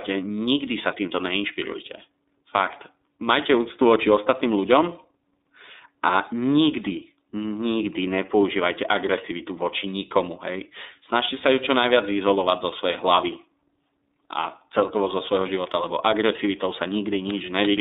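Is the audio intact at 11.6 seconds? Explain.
No. At 11.6 s the speech carries the iLBC codec's damage, which runs through the whole clip. Each short block of the signal is coded from its own excitation, independent of the one before, consistent with 30 ms frames in the 13.33 kbps mode, so the sound comes out plainly rough and slightly synthetic, confined to a telephone band of 250 Hz to 3.7 kHz. A spectrogram shows a hard ceiling near 3.7 kHz with nothing above and an emptied region below 250 Hz.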